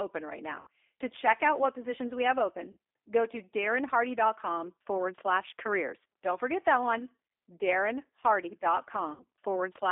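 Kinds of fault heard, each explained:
G.729 codec: narrowband 8 kbit/s speech coding throughout, confining the sound to roughly 300 Hz–3.6 kHz with plainly audible rough, synthetic texture.
VoIP packet loss concealed by the speech codec: three 60 ms gaps, near 0.61, 2.71 and 9.14 s, filled by a fading buzzy tone or coloured noise extrapolated from the preceding sound.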